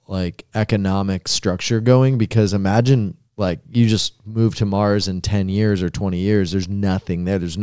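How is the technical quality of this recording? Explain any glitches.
No technical faults are audible in this speech recording, so there are no glitches to explain.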